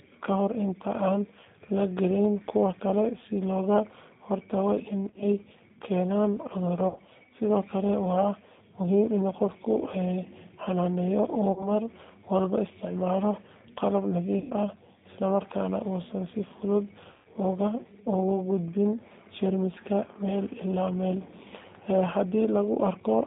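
G.729 codec, throughout the 23 s of speech: the 8 kbit/s coder rebuilds each 10 ms frame from a vocal tract filter, a pitch predictor and a few pulses rather than the waveform itself. The line passes only about 200 Hz to 3.7 kHz, so the speech is dull and thin. The coding damage is plainly audible as a rough, slightly synthetic quality.

VoIP packet loss concealed by the speech codec, at 5.09–5.26 s, 6.88–7.00 s, 11.52–11.68 s, 14.39–14.52 s and 17.12–17.27 s: packets went missing and the decoder filled the gaps by extending its last pitch and filter settings at falling gain. The first event sounds like brief stutters scattered over about 120 ms. The later ones are smeared, buzzy stretches that fade, the longest lasting about 130 ms. After each one, the speech takes a moment to regain full strength.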